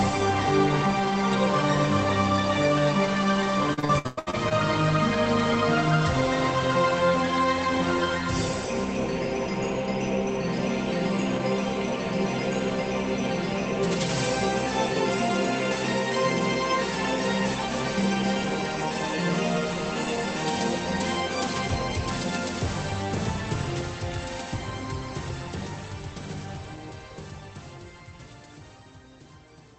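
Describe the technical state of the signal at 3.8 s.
At 3.8 s you're inside a burst of repeated packet loss (robotic sound), running from 3.73 to 4.53 s. Eight gaps, the longest about 104 ms, get patched by stretching the previous sound, so it comes out choppy with pieces missing.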